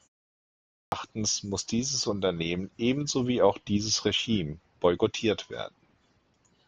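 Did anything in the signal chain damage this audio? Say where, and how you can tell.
Yes. At playback, the output device shows a clipped start after a pause. After about 0.37 s of silence at the head of the speech, the sound that should begin at 0.37 s is missing until 0.92 s, so roughly 0.55 s is swallowed and the speech starts abruptly, without its opening sounds. The device evidently went idle during the silence and took about half a second to wake and lock before passing audio again.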